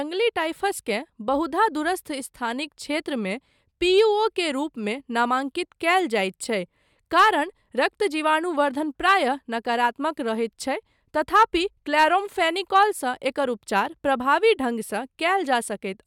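Speech recording with no audible technical faults.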